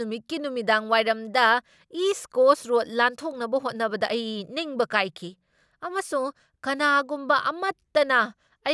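No dropouts, clicks, distortion or other transport or processing faults can be heard anywhere in the speech.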